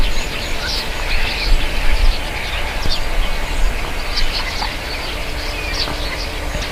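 At 0.68, 1.6, 2.86 and 5.76 s the sound jumps forward with no silent gap. That jump, a few tens of milliseconds lost each time, likely marks a dropped buffer (overrun), where samples were overwritten before being read, rather than a silent dropout.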